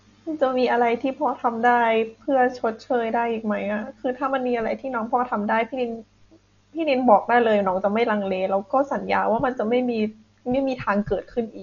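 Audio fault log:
Throughout: Dolby Digital compression, likely at a low bitrate around 48 kbps. The heavy coding removes everything above 7 kHz and fills starved frequency lines with dither noise, so the speech sounds dull with a rough flutter. On a spectrogram there is a flat ceiling at 7 kHz and grainy, speckled bands.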